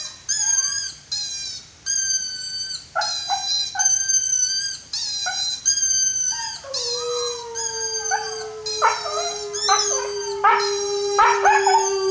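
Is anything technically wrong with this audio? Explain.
No, nothing is technically wrong with this audio.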